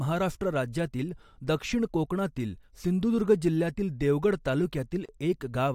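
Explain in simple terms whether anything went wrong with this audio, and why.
Near the end, at 5.06 s, the speech briefly drops out for about 32 milliseconds, then carries on from where it stopped. This is a gap at a join of encoded pieces: separately compressed sections were joined without trimming the short silence each one adds.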